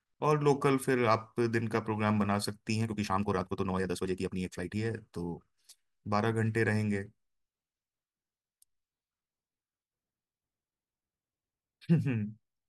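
From 2.79 s to 4.81 s the speech runs at about 1.62 times its normal pace. The pitch stays unchanged. This is a time-stretched section, likely from software squeezing that stretch by dropping short pieces. It sounds rushed.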